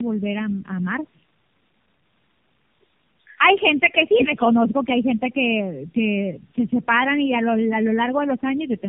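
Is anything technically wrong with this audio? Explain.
Yes. Throughout, the speech shows tandem speech coding. It sounds like three low-rate AMR-NB stages in a row, with G.711 links between them. Each coder re-encodes the previous one's artefacts, so the speech turns rough, muffled and warbly. A spectrogram shows nothing above 3.3 kHz, with smeared, unstable formant bands.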